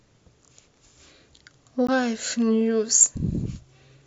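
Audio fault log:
1.87 s, block of digital silence: the speech drops to silence for about 15 ms and resumes with no fade. The result is a short tick-like hole, pointing to an output buffer that was not filled in time.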